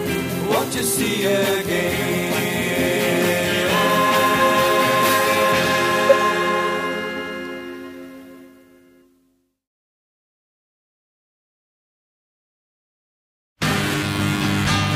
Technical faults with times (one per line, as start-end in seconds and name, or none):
4.40-4.42 corrupt frame decoded
6.09-6.13 corrupt frame decoded